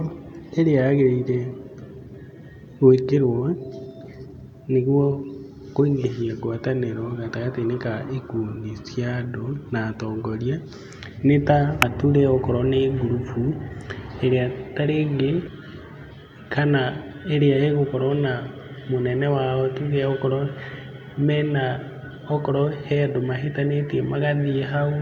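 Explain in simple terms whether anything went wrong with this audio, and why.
Damaged data in a compressed stream: part of the compressed speech was corrupted, so the decoder misread those frames and had to resync. This causes three brief chirps or blips, at 4.05 to 4.08 s, at 11.82 s, and at 15.44 to 15.48 s.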